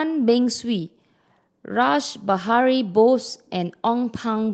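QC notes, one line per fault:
No faults found in the speech; the call path caps the top end at 8 kHz, consistent with an Opus stream near 20 kbps.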